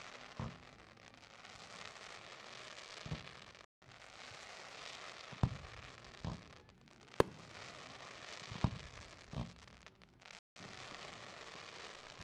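A digital broadcast dropout cuts the sound at 3.65 to 3.86 s and again at 10.39 to 10.61 s. The receiver muted on lost or corrupted frames, so each hole drops about 170 ms of programme, consistent with four lost frames, before audio resumes further along.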